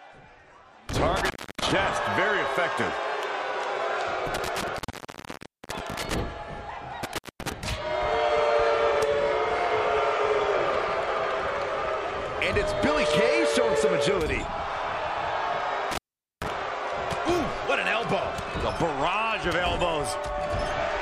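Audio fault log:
1.16–1.72 s, 4.34–6.14 s, 7.03–7.52 s, 15.91–16.48 s, intermittent contact: the sound drops out for about 0.29, 0.92, 0.22 and 0.44 s, with crackle at each break and faint hiss in the gaps, as a loose cable or plug briefly opens the signal path.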